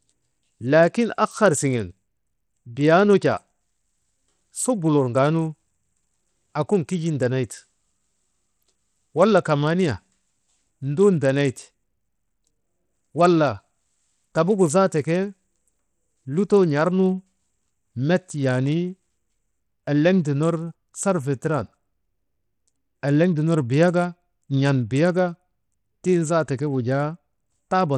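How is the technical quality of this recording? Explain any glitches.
The technical quality is poor: the speech carries plainly audible coding damage from start to finish. The treble flickers in and out, and a gritty noise with aliasing rides on the sound, most likely from Bluetooth SBC compression at a low bitrate, consistent with roughly 80 kbps. Starved of bits, the upper sub-bands drop out while the rest are coarsely quantised. A spectrogram would show the top band blinking on and off in blocks, with grainy noise filling the lower bands.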